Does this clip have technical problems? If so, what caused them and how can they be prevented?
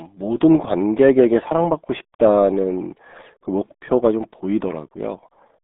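Yes: the RealAudio 14.4 codec runs throughout, leaving speech muffled, gargly and cut off above about 3.8 kHz, which fits an 8 kbit/s dial-up stream. Prevent it by encoding at a modern, higher bitrate.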